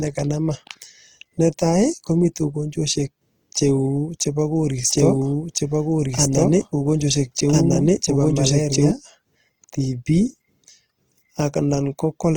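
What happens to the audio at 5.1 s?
At 5.1 s the clip is inside a doubled audio track, running from 4.89 s to 8.91 s. A second full-band copy of the same speech plays about 1.5 s behind the original, at roughly equal level and with no added reverberation. It cuts in and out abruptly, most likely from a second, slower capture path or an edit.

The same moment also carries the Opus compression heard throughout the clip. The low-bitrate CELT mode, likely running at around 16 kbps, fills starved bands with folded or noise content. The speech therefore sounds grainy and rough, although the bandwidth stays wide, up to about 20.2 kHz.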